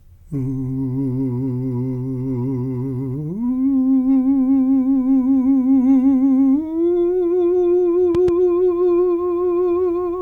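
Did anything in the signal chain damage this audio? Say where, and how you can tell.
Yes: a loud pop, a quick double thump from 8.15 to 8.31 s, a few dB over the music, which carries on underneath. Likely an analogue wiring or switch transient.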